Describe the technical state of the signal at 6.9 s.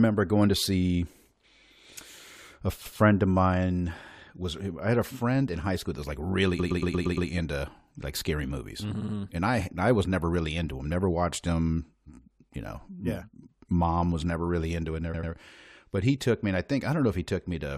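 Repeated frames, 6.58–7.28 s, after "school that was like": one 116 ms block of compressed audio replays six extra times, a stutter adding 0.7 s.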